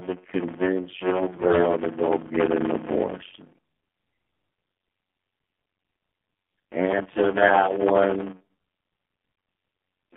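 Block size mismatch (padded), throughout the clip. One stage hands over blocks of 256 samples while the next reads longer blocks and fills the shortfall with silence. The result is a steady buzz at 91.9 Hz, the rate at which those gaps recur, which fits a read block of about 480 samples. The speech also runs at 0.533 times normal speed, stretched out by the inserted silence, yet its timbre stays.

AMR narrowband mobile codec, also throughout. The speech has passed through AMR-NB, which rebuilds it from a vocal-tract model driven by a few pulses in each short subframe. The sound fits a low mode of around 7.4 kbps, so the damage is plainly audible: buzzy and synthetic, with a hollow, phone-line quality. Everything lies between 200 Hz and 3.5 kHz, so there is no low body and no treble sparkle.

AMR bit errors, from 1.32 s to 1.59 s. A poor link corrupted the weakly protected bits of the codec frames at around one bit in ten, while the essential bits got through intact. 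Across this quarter second, which fits about a dozen damaged frames, the driving pulses land in the wrong places and the fine pitch, gain and spectral values go astray. The speech keeps roughly its pitch and loudness but turns hoarse, scratchy and gargly.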